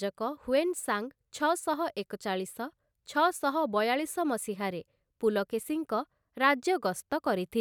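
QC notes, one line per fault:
No faults were found in the speech on this pass.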